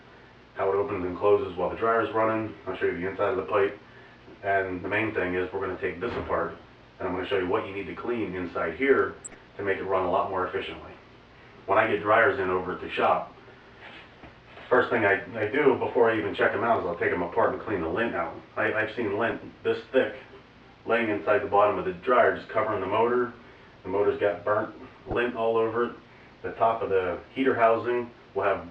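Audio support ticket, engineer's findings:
DAB burbling, three bursts. 9.18–9.34 s: burbling over the programme. 19.28–19.32 s: brief burst, shortest event. 24.85–25.14 s: longest burst, spanning many frames. Component: DAB receiver, MP2 decoding path. Mechanism: weak reception. Residual bit errors, a fraction of a percent, slip past error correction. Corrupted samples put noise blips in single sub-bands; corrupted scale factors make sub-bands jump in level for up to a frame.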